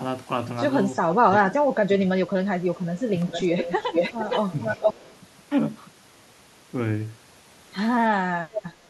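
Speech with two kinds of call-path fault. Echo leak is heard four times: a faint, brief delayed copy at 0.95 to 1.0 s, arriving 363 ms late and far below the talker; then stronger copies 455 ms behind the original at 3.24 to 4.4 s, 4.59 to 5.16 s and 8.53 to 8.61 s. The middle ones sit only slightly below the direct speech, and the one at 4.59 s is about as loud. This is likely a far-end loudspeaker whose echo canceller failed to remove what its microphone picked up. Speech suppressed in double talk appears at 1.06 to 2.44 s, 3.11 to 3.34 s, 4.77 to 5.12 s, and from 8.25 s to the end. The talker's level dips in patches, by about 10 dB in the shorter spans and by roughly 20 to 25 dB in the first and last, with roughly a second of speech pulled down in the first span. Most of these dips overlap the echo bursts, pointing to an echo canceller that could not separate the talker from the returning echo and attenuated both.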